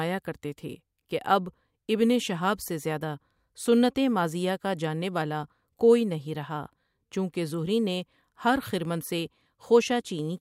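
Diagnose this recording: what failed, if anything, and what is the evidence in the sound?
Nothing in the signal chain has failed: the speech arrives continuous and intact, with no audible disturbance at any stage between capture and playback.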